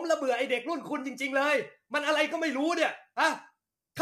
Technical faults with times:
0.00-4.01 low-delay AAC compression

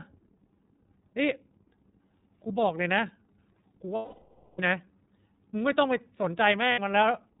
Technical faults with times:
0.00-7.40 iLBC codec
3.95-4.60 lost iLBC frames
6.72-6.79 lost iLBC frames

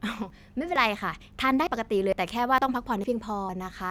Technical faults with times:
0.30 audio missing between chunks
0.76 audio missing between chunks
1.21 audio missing between chunks
1.67 audio missing between chunks
2.13 audio missing between chunks
2.58 audio missing between chunks
3.04 audio missing between chunks
3.49 audio missing between chunks

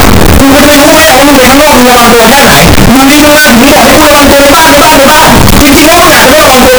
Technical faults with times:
0.00-6.79 signed and unsigned mixed up

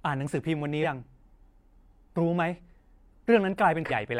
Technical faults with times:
0.79-0.83 compressed frames skipped
3.86-3.91 compressed frames skipped

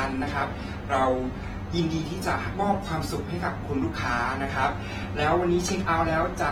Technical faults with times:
0.00-6.51 AAC compression

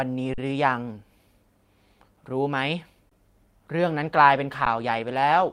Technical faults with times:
0.34-0.38 underrun with held sample
3.09-3.11 underrun with held sample
4.02-5.52 call bitrate drop
4.65 underrun with held sample

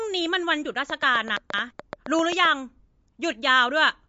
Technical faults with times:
0.00-4.09 MP3 compression
0.90-2.46 train of clicks
1.37-1.71 chunks out of order

